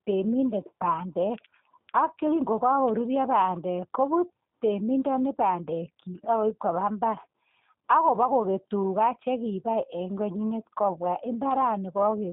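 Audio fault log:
Throughout, G.729 codec: the speech has been squeezed through a low-rate VoIP coder, most likely G.729A at 8 kbit/s, and the damage is easy to hear. The band sits roughly between 150 Hz and 3.7 kHz, so the top end is gone and it sounds boxy. Because the coder rebuilds each short frame from a vocal-tract filter, a pitch guess and a handful of pulses, the voice comes out a bit rough and buzzy, still intelligible but clearly synthetic.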